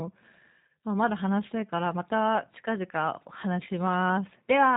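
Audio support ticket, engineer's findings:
G.729 codec artefacts, whole clip. Speech plainly rough and synthetic, nothing above 3.8 kHz. Frame-by-frame rebuild from filter, pitch predictor and sparse pulses, which fits an 8 kbit/s G.729A path. Unlike simple telephone band-limiting, the roughness comes from the resynthesis itself.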